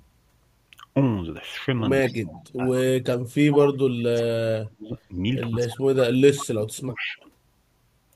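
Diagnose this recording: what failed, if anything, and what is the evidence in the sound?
Echo leak in the call processing. A delayed copy of the speech, trailing it by 145 ms, appears at 2.08–2.44 s, 3.52–3.57 s, 6.37–6.46 s and 6.94–6.98 s. It sits about 30 dB down at first, rises to about 10 dB down at 3.52 s, and is about 15 and 30 dB down later. On a spectrogram it shows as a ghost of the formant pattern shifted 145 ms right. This is likely a far-end echo canceller passing residual loudspeaker pickup.

Speech suppressed in double talk, also in the call processing. The speech level collapses in pieces across 2.08–3.35 s, 3.91–4.95 s and 5.51–7.22 s. It drops by roughly 40 dB in the first two spans and about 30 dB in the third, affecting around 0.7, 1 and 1.5 s respectively. On the waveform the envelope caves in to near-silence in chunks. The spectrogram shows blank gaps. The likely mechanism is the echo canceller mistaking overlapping talk for echo and attenuating both.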